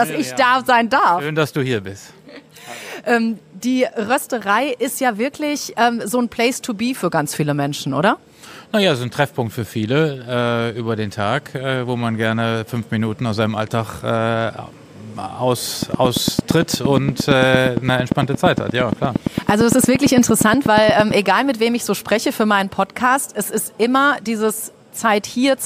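From 15.83 s to 21.12 s a train of clicks runs over the audio: short, near-identical pulses at a steady 8.7 per second, around fifty in all, each peaking roughly 15 dB above the surrounding signal. They read as a regular ticking that stays audible through quieter passages as well. The cause is likely electrical interference from nearby equipment or a faulty connection or power supply injecting a repeating pulse into the signal path.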